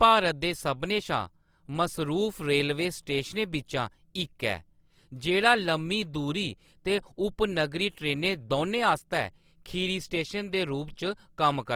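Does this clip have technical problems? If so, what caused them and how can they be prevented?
Yes. Throughout the speech, likely Opus compression in its CELT music mode at a starved rate, which fits about 24 kbps, kept band energies but filled in fine detail, so the speech sounds plainly rough, grainy and noisy despite bandwidth reaching 20.2 kHz. Encoding at a higher bitrate would prevent this.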